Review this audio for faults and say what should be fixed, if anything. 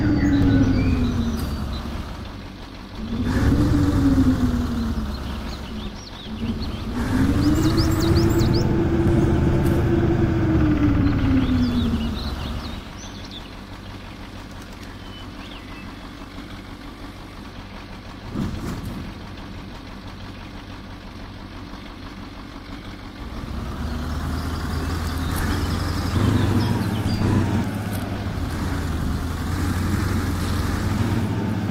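Nothing here needs fixing, so you can leave this one as it is.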